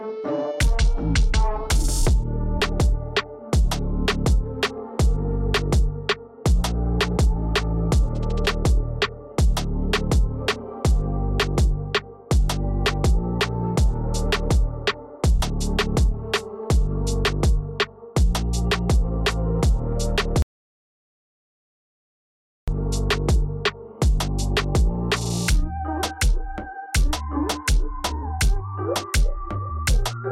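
At 20.42 s the sound cuts out abruptly and stays gone until 22.68 s. That is an audio dropout to silence lasting about 2.25 s. The gap is silent, with no room tone. The input was likely lost while recording continued, writing silence.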